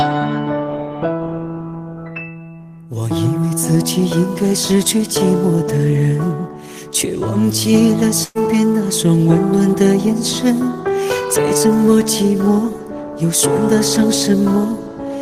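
At 8.23 s a burst of packet loss begins, lasting to 8.38 s. Around 120 ms of audio never arrived in time. The receiver stretched the last sound over the gap and faded it. It becomes a brief fading fill, then the audio jumps ahead.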